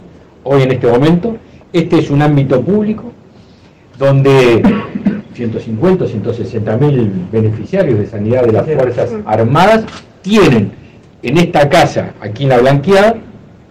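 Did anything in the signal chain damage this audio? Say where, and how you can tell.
Yes. A harsh, gritty fuzz sits on every loud moment from start to finish, with a crackly edge on the peaks, which is hard clipping. The signal was driven about 16 dB past what some stage could pass, most plausibly a converter input or a sample-format conversion that saturates at full scale, so the waveform tops were sliced flat. Roughly 7 percent of samples sit pinned there, and those flat tops spray high harmonics across the upper spectrum.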